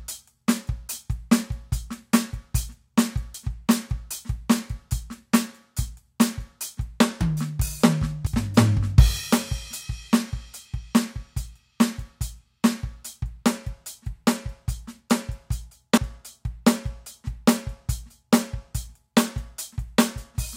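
At 3.34, 8.27, 9.2 and 15.98 s the music jumps forward, each time skipping about a tenth of a second with no gap of silence. These splices are likely a dropped buffer (overrun): samples were overwritten before being read, so the two sides were butted together. On a waveform each shows as an abrupt discontinuity; a spectrogram shows a thin full-height vertical line where the sound changes without transition.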